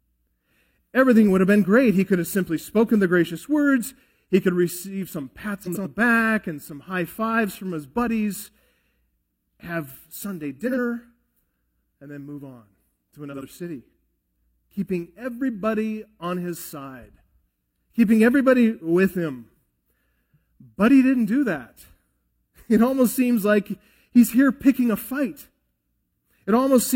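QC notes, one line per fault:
5.63–5.87 s, 10.67–10.78 s, 13.32–13.44 s, frames out of order: brief garbled flutter, after "could receive some" and "then move on to". Adjacent blocks of about 93 ms, then 46 ms, play with halves swapped, and no time is lost.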